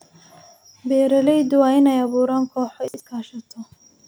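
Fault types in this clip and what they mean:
Chunks out of order: around 2.88 to 3.0 s, one 60 ms chunk of the speech plays one chunk late, after the piece that should follow it. This creates a brief jumbled stutter with three hard joins. Unlike a dropout or repeat, nothing is missing or doubled.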